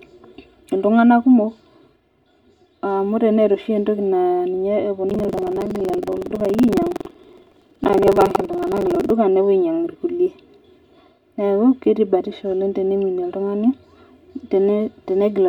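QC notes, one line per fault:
throughout: channel delay (comb filtering); one channel lands about 3 ms late and is summed to mono, leaving fixed notches from around 150 Hz upward: steady hollowness, never rhythmic.
5.06–9.14 s: buffer tearing; roughly a fifth of each buffer replays audio about 150 ms old, giving a periodic 21.5 Hz rattle, which fits a 2048-sample buffer.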